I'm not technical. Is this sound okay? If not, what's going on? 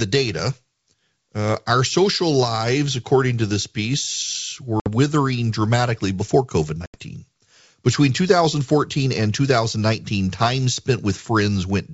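No. This speech has packet loss on an ADPCM call. Two short holes appear, at 4.80 to 4.89 seconds and at 6.86 to 6.97 seconds. About 60 and then 80 milliseconds of sound went missing and were filled with silence. The decoder rebuilds each sample by predicting from the ones before it. After a gap it loses track, so the sound comes back slightly distorted before it settles.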